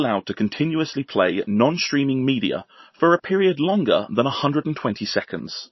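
From start to end the speech carries plainly audible damage, likely from MP3 compression at a starved bitrate, roughly 26 kbps. Nothing survives above 5.8 kHz, and unlike a plain low-pass filter, faint detail flickers in and out, giving a watery, swirling texture and metallic chirps on s sounds.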